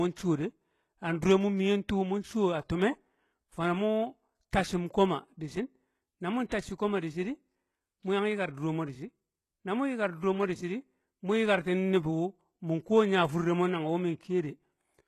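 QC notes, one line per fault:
throughout: HE-AAC compression. Nothing survives above about 12.3 kHz, and the top end that remains sounds synthetic: s sounds come out gritty and lispy, with a metallic sheen over the upper speech range. That points to a codec rebuilding the treble by copying lower bands upward instead of coding it, so the harmonics don't line up above the crossover. The damage is plainly audible, which fits a very low bitrate of around 16 kbps. HE-AAC is the likely culprit.
2.69 s and 6.48 to 6.52 s: pre-echo. Just before each of these attacks there's a brief smear of hiss, very short at 2.69 s (about 10 ms) and a longer 35 ms spread at 6.48 s, and both attacks sound soft rather than crisp. The coder spread quantisation noise sized for the loud onset across its whole block, so that noise also fills the quiet gap leading into the attack.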